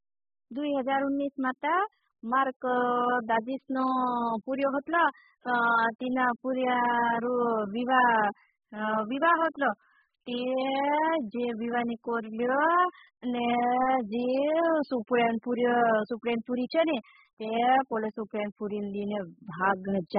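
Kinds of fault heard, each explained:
AAC compression: The speech is heavily damaged throughout, with nothing above 5 kHz, so it sounds dull and band-limited. The likely cause is AAC-LC encoding at a very low rate, and the damage fits roughly 8 kbps. The encoder splits each frame into frequency lines and quantises them coarsely against a hearing model. At this rate it drops the upper band and thins or substitutes content below it, leaving a smeared, warbling, fizzy texture on sustained sounds and sibilants.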